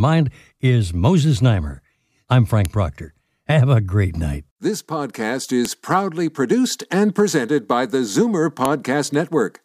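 At 2.65 s a sharp, loud click cuts into the speech. It returns at 5.65 s, just before "proudly produced and presented", and again at 8.65 s. This is a file header played as audio. The clip was assembled from 3-second WAV pieces joined without stripping their headers. Those header bytes get read as sample values. Each snap lands exactly every 3 s, at a piece boundary, regardless of what the speech is doing.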